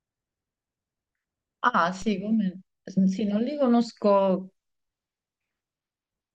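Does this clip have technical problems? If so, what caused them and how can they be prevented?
Yes: a DC step at 2.02 s, where the waveform's zero line jumps by about -30 dBFS and produces a low thump while the speech continues unchanged; a 5 Hz high-pass then bleeds the offset away. Calibrate converters and switch offset-carrying inputs in only with blocking capacitors or ramps.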